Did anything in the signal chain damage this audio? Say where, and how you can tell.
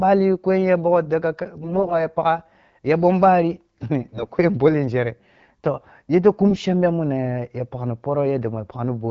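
Yes, the network stage: AMR bit errors hit three spots, 1.62 to 1.94 s (just before "ya pagha ya ɓom"), 4.0 to 4.32 s (after "pagha ya ɓom bari"), and 6.49 to 6.64 s (after "toh yete"). Pitch and level hold, but the speech goes gargly and scratchy. That fits roughly 7% of the weakly protected frame bits flipping on a poor link, scrambling pulse positions and fine gain and spectral values, on a 12.65 kbit/s AMR-WB path.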